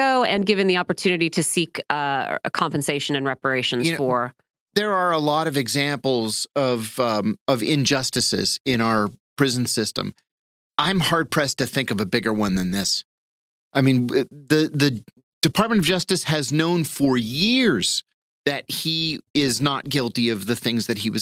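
No technical faults are audible.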